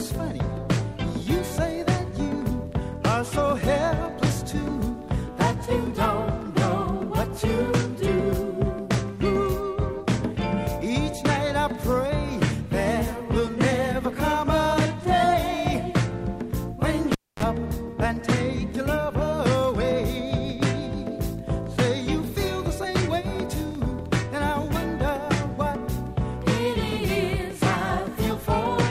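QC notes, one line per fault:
17.12–17.43 s, cable pulled and plugged in: a pop as the live lead comes out, about 256 ms of near silence, then a 31 ms burst of 50 Hz mains buzz while only the tip touches, and a second pop on reconnection. The waveform shows two spikes around a flat gap, and the spectrogram shows a thin 50 Hz band just before the second spike.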